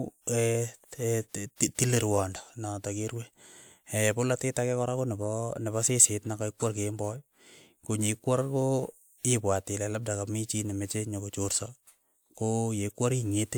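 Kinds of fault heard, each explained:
No kinds of fault are heard in this clip.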